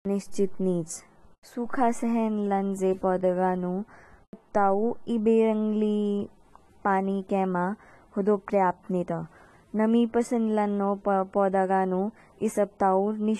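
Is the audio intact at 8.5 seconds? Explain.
No. At 8.5 seconds, as through the whole clip, the speech sounds dull and smeared, with a plainly audible warbling, fizzy texture on sustained sounds and sibilants, and nothing above 12.5 kHz. This is likely AAC compression: the encoder quantises each frame's frequency lines coarsely against a hearing model, lowering the cut-off and leaving gaps in the spectrum. That fits AAC-LC at a low bitrate, around 37 kbps.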